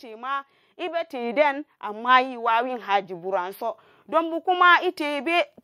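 The automatic gain control judged the speech input too quiet and kept raising its gain from 0.05 to 5.56 s, so voice and background swell together by about 11 dB as automatic gain rising.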